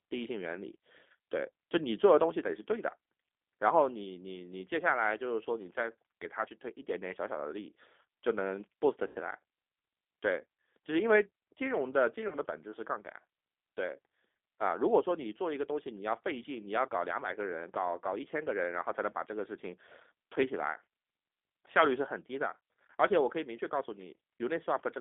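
Throughout, the G.729 codec rebuilds the speech at 8 kbit/s within about 250 Hz to 3.5 kHz. Its pulse-coded synthesis makes it rough and synthetic, not just muffled like plain band-limiting. At 9.07 to 9.17 s, 12.28 to 12.35 s, and 22.58 s, VoIP packet loss concealed by the speech codec replaces about 80, 40 and 20 ms of missing audio. The decoder extends the last sound into a fading buzz or coloured noise that stays weak after audio resumes, rather than leaving a silent dropout.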